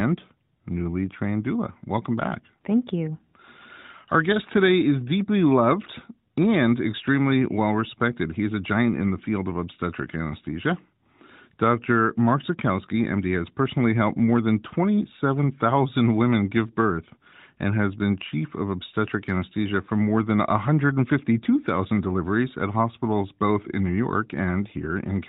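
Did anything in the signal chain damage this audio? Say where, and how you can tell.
No, the signal chain shows no damage at any stage, and the audio's technical state is what a healthy narrowband mobile call path produces.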